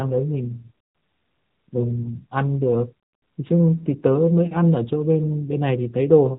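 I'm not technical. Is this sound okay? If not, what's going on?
No. The AMR narrowband mobile codec runs through the whole recording. This is the compression used for 2G and 3G phone calls: it keeps only the lower part of the sound, nothing above 4 kHz, and rebuilds the voice from a simple model of the mouth and throat. Here that damage is plainly audible, giving the speech the muffled, buzzy and synthetic quality of an old mobile call.

Lost AMR speech frames come at about 3.79 to 3.96 s. A piece of the call failed to arrive intact, so the phone's decoder filled the gap by repeating the last sound it had received, at falling volume, and then eased back into the real signal. What you hear is a brief dip or wobble in the voice. The shortness of the glitch fits a single missing 20 ms slice of speech.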